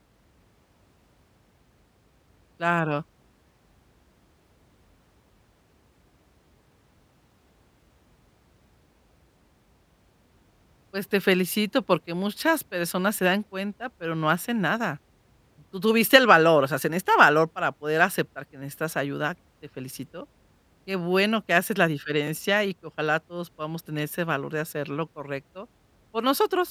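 Nothing in this recording jumps out as a technical fault, so there's really nothing to walk through here.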